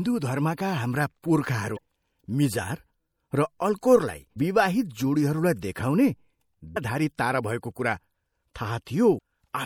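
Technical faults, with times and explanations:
Throughout: MP3 compression. The speech sounds watery and swirly, with metallic chirping on s sounds and softened consonant attacks. This is likely low-bitrate encoding, which fits a 64 kbps MP3. Short on bits, the encoder cuts the treble and drops weak frequency lines, which flicker between frames.
1.74–1.78 s, 4.33–4.37 s, 6.73–6.77 s and 9.16–9.19 s: damaged data in a compressed stream. Each is a brief squawk or blip of about 30 to 45 ms. The third comes just before "तारा भएको". Corrupted bytes make the decoder misread frames and lose sync. It then skips ahead to the next valid frame header.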